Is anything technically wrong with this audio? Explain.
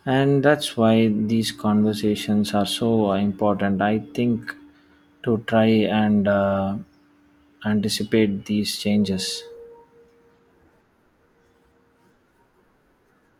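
No, nothing technically wrong can be heard in this speech recording. Listening through the whole clip turns up no fault to point to at any moment.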